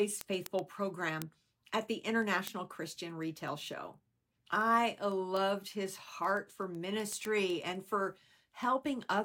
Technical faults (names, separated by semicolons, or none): word clock ticks